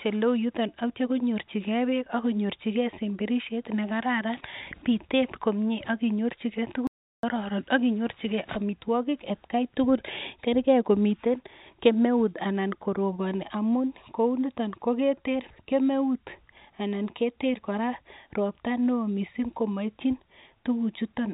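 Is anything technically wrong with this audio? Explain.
Yes. There is an audio dropout to silence from 6.87 to 7.23 s, about 0.36 s long. The speech stops abruptly and comes back just as abruptly. The gap is silent, with no room tone underneath. The likely cause is a brief loss of input, such as a dropped connection or a momentary mute, while recording carried on writing silence. Whatever was said in that gap is lost. The band also stops at 4 kHz, which fits a narrowband telephone codec on a call path.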